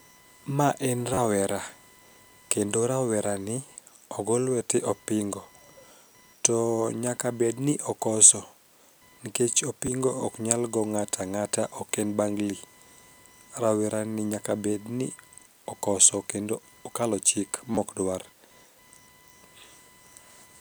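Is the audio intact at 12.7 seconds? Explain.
No. Computer activity noise runs throughout, including 12.7 s: processor load shifts the shared ground, adding a roughly 1 kHz buzz about 35 dB below the speech.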